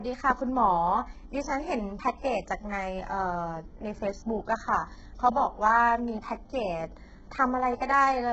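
Speech, heavily damaged throughout by what is likely HE-AAC compression at a bitrate that fits around 8 kbps. The treble is rebuilt from copied lower bands and stops at 8 kHz, so s sounds turn gritty and metallic rather than simply dull as with a plain low-pass filter.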